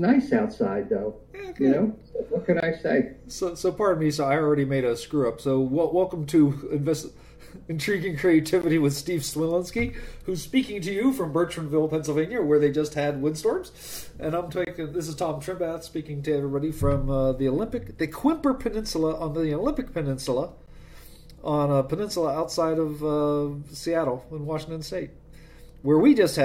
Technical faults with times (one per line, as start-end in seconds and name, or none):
2.60-2.63 gap between stream segments
8.62 gap between stream segments
14.65-14.67 gap between stream segments
20.66 gap between stream segments